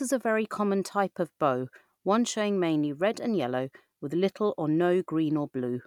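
Speech clip; no technical faults can be heard.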